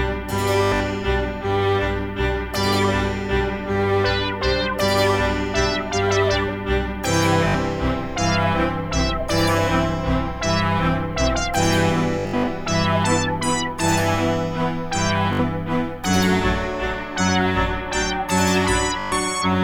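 Bluetooth stutter occurs at 0.64–0.80, 7.48–7.55, 12.19–12.48, 15.33–15.39 and 19.00–19.12 s, with gaps from 61 to 203 ms. Late or lost wireless packets made the receiver replay its last short slice, giving a machine-gun buzz before the sound resumes further on.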